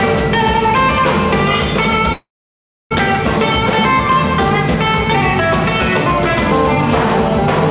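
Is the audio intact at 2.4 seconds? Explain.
No. A call audio freeze runs from 2.12 to 2.93 s, likely a jitter buffer running empty. A brief fading fill drops to about 0.66 s of silence, then the audio resumes with nothing lost.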